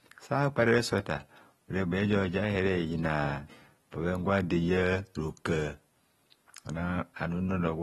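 From start to finish the speech carries AAC compression damage, and it's plainly audible. Nothing comes through above about 12.4 kHz, so the top end sounds dull, and sibilants and held sounds take on that smeared, fizzy, warbly texture. That's what you get when the encoder is likely AAC-LC starved for bits, which fits a bitrate around 32 kbps. It drops the high band and coarsely quantises what's left.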